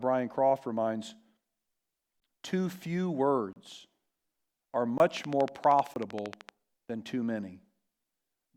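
Four sharp dropouts break up this speech clip: short holes at 2.20–2.22 s, 3.53–3.56 s, 4.98–5.00 s and 5.94–5.96 s, where the sound snaps off and back on with no fade. These are blocks of digital silence, stretches where the output went silent, most plausibly because the audio buffer wasn't filled in time. Three gaps last 20 ms and one about 30 ms, which suggests whole buffer-sized chunks going missing. From 5.17 to 6.50 s there is also a train of clicks, around twenty evenly spaced pops at 12.9 per second, standing out roughly 10 dB above the speech and audible regardless of what is being said underneath. That steady, repeating pattern of near-identical pulses is likely interference from nearby equipment or a faulty connection or power supply injecting spikes into the signal path.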